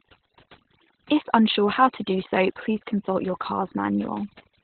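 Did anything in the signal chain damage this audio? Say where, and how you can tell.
Yes, two stages hurt it. First, call processing: there's overdone noise removal across the whole clip. Background collapses to near silence with twinkly specks, because the suppressor is gating individual frequency bands near its noise estimate and taking quiet speech detail with them.

Second, the codec: this is Opus voice compression, run hard the whole way through. Nothing survives above about 4.3 kHz, so it's narrowband, and the speech comes out muffled, hoarse and a bit robotic. That coarse linear-prediction sound points to SILK at something like 8 kbps.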